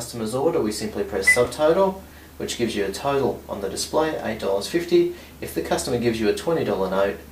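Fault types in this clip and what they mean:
Chunks out of order: at 1.45 s and 3.83 s a 5.8 ms chunk plays one slot late, giving a brief jumble with three hard joins each time.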